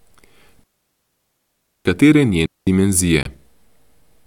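Digital wireless dropouts cut this speech clip twice, from 0.64 to 1.85 s (about 1.22 s of muting) and from 2.46 to 2.67 s (about 211 ms). Each time the receiver lost too much of the radio stream and muted behind a very brief fade, leaving clean near-silent holes with no noise burst on either side. A Bluetooth dropout follows from 3.23 to 3.27 s, a gap of about 23 ms that fits a single lost frame, likely audio packets arriving too late for the headphones and being discarded, after which the sound picks up further along as though it had kept playing.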